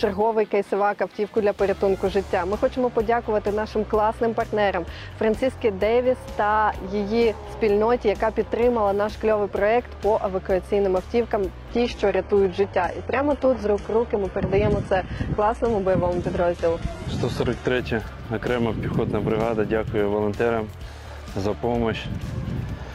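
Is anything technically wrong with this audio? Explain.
Yes. From 11.69 to 17.69 s, everything above 11.8 kHz suddenly vanishes and artefacts rise, without a gap. This is an adaptive stream switching to a lower bitrate.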